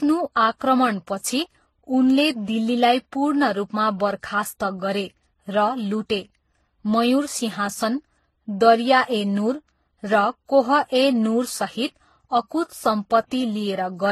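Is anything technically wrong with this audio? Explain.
Yes. Throughout the speech there is transcoding between lossy codecs. Each encoding pass re-codes the earlier artefacts and adds new ones. Nothing is heard above 12.3 kHz. The mixed artefacts point to a chain likely ending in MP3.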